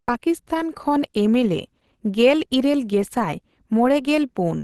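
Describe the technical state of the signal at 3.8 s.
At 3.8 s the speech carries Opus compression, present across the whole clip and likely from low-rate hybrid-mode encoding, which fits roughly 16 kbps. It sounds muffled and hoarse, and a spectrogram shows a flat ceiling with nothing above 12 kHz.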